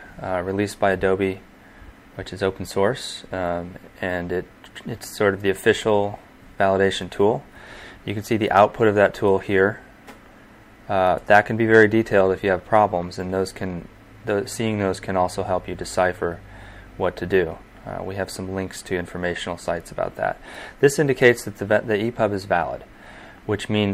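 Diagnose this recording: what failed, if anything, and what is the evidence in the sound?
Nothing here points to a failure at any stage of the chain, so there's really nothing to diagnose in this one.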